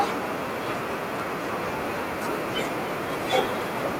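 Throughout the clip, the speech is shadowed by an echo with no canceller: the far end's loudspeaker output is re-captured by its microphone and returned unremoved. A thin copy arrives around 300 ms late, about 20 dB down, distinct rather than the smooth tail of room reverberation.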